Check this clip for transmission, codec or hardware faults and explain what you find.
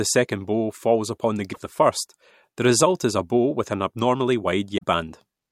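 Two short bursts of damaged data in a compressed stream disrupt the speech, at 1.50 to 1.57 s and 4.74 to 4.84 s. Corrupted bytes make the decoder misread frames and hunt for the next valid header, producing a brief disruption heard as a chirp, squawk, click or short hole.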